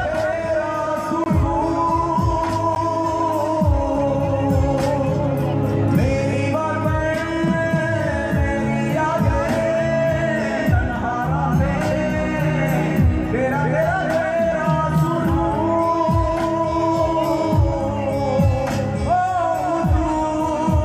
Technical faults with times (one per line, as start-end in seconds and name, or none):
1.24-1.26 block of digital silence
2.75 block of digital silence